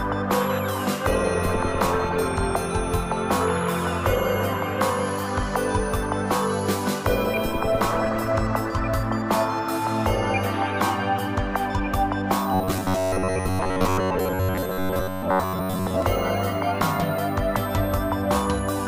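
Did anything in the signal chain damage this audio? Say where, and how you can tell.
Yes. From 12.53 to 16.02 s the sound collapses into a rigid, metallic buzz at 93.8 Hz: robotic sound from repeated short buffers. Likely a starved driver buffer looping about 10.7 ms slices, so most audio is skipped. Unlike dropouts, there are no silent gaps.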